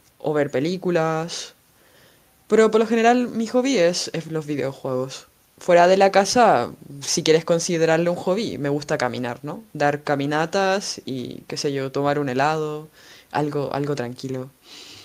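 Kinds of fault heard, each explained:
No technical faults can be heard in this recording.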